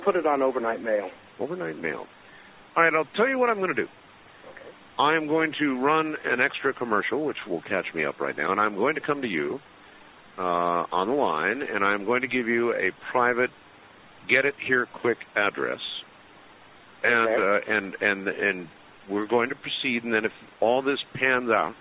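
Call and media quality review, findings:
No faults heard in the signal path: no dropouts, glitches or level problems anywhere in the clip.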